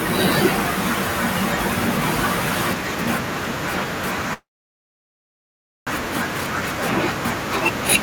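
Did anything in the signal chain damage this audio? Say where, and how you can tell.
Yes. Between 4.33 and 5.89 s there is a call audio freeze, likely at the network stage. The last sound trails into a brief fading tail, then about 1.4 s of silence. Speech resumes exactly where it stopped, so, unlike packet loss, nothing is missing and everything after is simply delayed by about 1.5 s.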